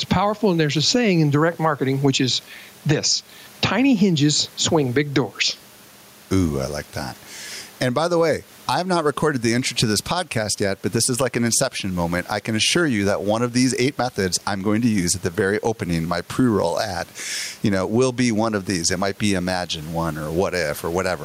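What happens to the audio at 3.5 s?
At 3.5 s the gain pumping heard across the whole clip is present. The room noise sits about 36 dB below the speech. The level swings by around 10 dB. The likely cause is gain set far too high, with a fast limiter pulling it down.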